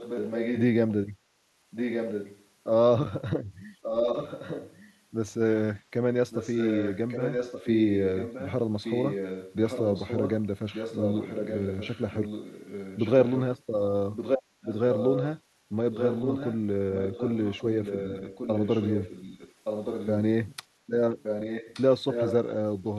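Speech with an echo leak: a far-end echo canceller likely failed to remove its loudspeaker pickup, so a copy trailing about 1.17 s behind returns only slightly quieter, and weaker across the two longest stretches, at 0–0.62, 1.71–2.46, 3.82–4.96, 6.29–13.61, 14.15–15.28, 15.92–20.11 and 21.23–22.34 s.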